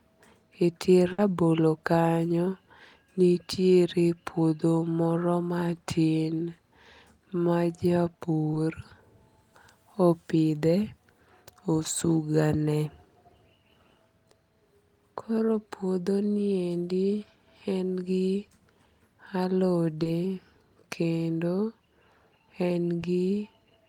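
From 1.12 to 1.19 s the sound stalls into a brief held, fading tail, then picks up slightly further along. This is a burst of packet loss: about 60 ms of the call arrived too late or not at all. The receiver stretched the last sound to cover the gap, and the audio between was never recovered.

Short smears or wobbles follow at 8.53 s, 15.52 s, 20.03 to 20.06 s and 23.00 to 23.02 s. Each is short concealed packet loss, where 10 to 20 ms of audio missed the decoder and was patched by continuing the preceding sound before blending back into the real signal.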